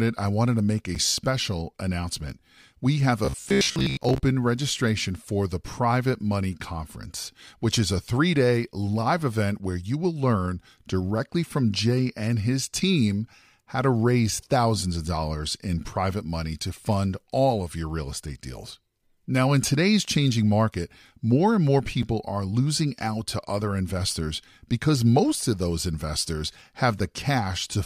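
At 0.95 s, between "wanted to make a" and "special announcement", a block of digital silence drops the speech out for about 7 ms. Its hard edges produce a tick rather than a buzz. From 3.25 to 4.21 s, just before "registration for the", the speech turns rigid and metallic on a fixed 66.7 Hz drone. This is robotic sound from repeated short buffers, likely from a 15 ms segment looping over most of that stretch. At 22.03 s, between "market more and more" and "are losing out to", another 6 ms silent hole ticks, which fits a 256-sample buffer left unfilled.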